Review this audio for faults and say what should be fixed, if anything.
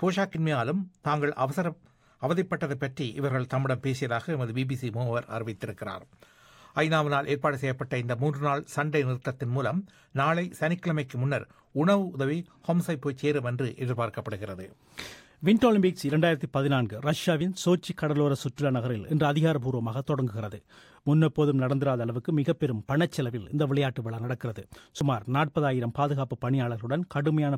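At 25.01 s there is an abrupt jump forward, skipping about 20 ms of sound, likely a dropped buffer (overrun) where unread samples were overwritten. Read the input promptly, using larger buffers or a higher-priority capture thread.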